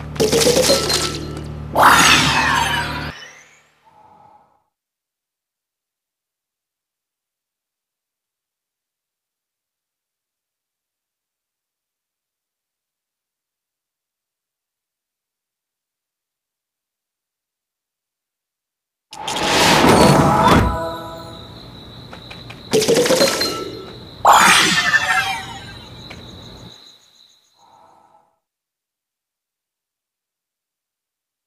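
A CD skip at 3.10 s: a knock or a flaw in the disc surface throws the laser off its track onto a different turn of the spiral, and the player drops out for only a few milliseconds before resuming from the wrong place. The result is a small tick followed by an abrupt discontinuity, with the audio jumping to a point that does not follow on from what came just before.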